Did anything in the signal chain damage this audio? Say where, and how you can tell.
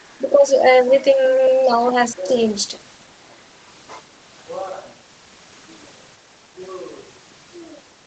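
Yes. Speech suppressed in double talk occurs at 0.25 to 0.64 s, 1.49 to 1.8 s and 2.08 to 2.31 s, in the call processing stage. The level sags there, by around 10 dB in the first dip and about 5 dB in the two later ones, then recovers. This is likely the echo canceller's suppressor mistaking simultaneous far-end speech for echo and pulling the whole microphone signal down to be safe.

Other side's voice leaking through appears at 1.85 to 1.93 s, again in the call processing stage. A brief scrap of a second voice is audible just after the second dip, very faint and far below the main speech. The likely cause is the echo canceller leaving a small residue of the loudspeaker signal in the microphone path. The band-limiting to 8 kHz comes from the Opus call path.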